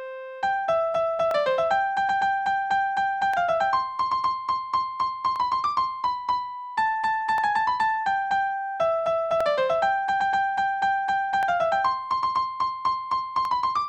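The audio was split into overlapping chunks: each 2 s block starts about 23 ms before the previous one ends, so that sliver repeats at every join. Brief stutter-clicks fall every 2 s, at 1.31–1.34, 3.34–3.36, 5.36–5.38, 7.38–7.41, 9.41–9.43, 11.43–11.45 and 13.45–13.48 s.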